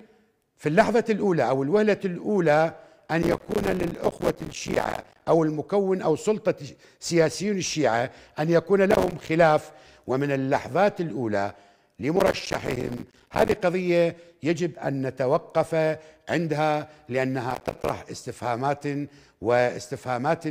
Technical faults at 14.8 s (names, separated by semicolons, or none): none